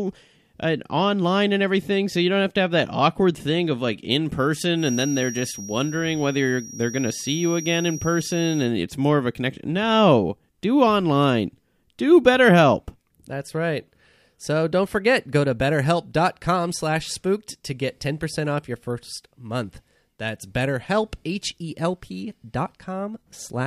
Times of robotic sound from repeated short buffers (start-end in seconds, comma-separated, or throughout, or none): none